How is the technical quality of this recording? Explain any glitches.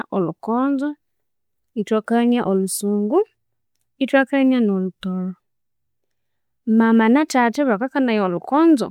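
The technical quality of the recording is sound, with no glitches to explain.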